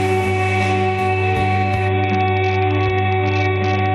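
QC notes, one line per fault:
1.89 s to end: Bluetooth SBC bit pool drop. The treble dulls suddenly and a gritty noise rises, lasting to the end. The top sub-bands get almost no bits, and the rest are coarsely quantised. This fits a bit pool cut from 28 to 7, near 66 kbps.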